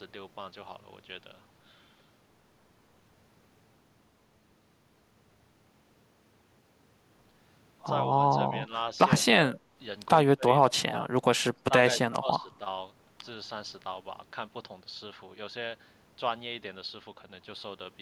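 An echo canceller most likely mistook both sides talking at once for its own echo, causing speech suppressed in double talk at 9.47–9.61, 10.36–10.47, 10.69–11.06, 11.52–11.72 and 12.02–12.61 s, where the speech dips by roughly 10 to 25 dB.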